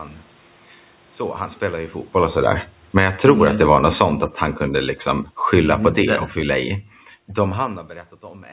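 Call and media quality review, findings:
Automatic gain falling, AGC stage. Gain pulled down about 8 dB from 2.17 to 4.15 s, after "han spelar ju", then about 4 dB from 5.07 to 6.86 s, after "han kunde". Speech and room noise sink together, level slumping gradually.

Automatic gain rising, same AGC. Gain pushed back up about 5 dB from 3.16 to 4.36 s, overlapping the first decline, ending just before "han kunde". Voice and background swell together over about a second, so level pumps down-up-down. Band stops at 4 kHz, consistent with a G.711 call path.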